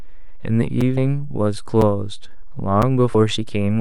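A DC offset runs through the whole speech clip. The waveform sits shifted away from zero by a constant amount. You cannot hear it as such. It shows as steady energy at the very bottom of the spectrum and eats into headroom.

At 0.81 s comes the first gap between chunks. A hole of 6.5 ms cuts in. The audio arrives in one-second chunks with silence left at each join. Nothing is lost, but the flow breaks.

At 0.97 s, compressed frames are skipped. The speech jumps ahead by about a tenth of a second. The jump points to a few missing frames of roughly 24 ms each.

The same chunk gap returns at 1.81 s and again at 2.82 s. Each is 6.5 ms long, about one second apart.

At 3.14 s, frames are skipped again. This jump is a little shorter, around 70 ms.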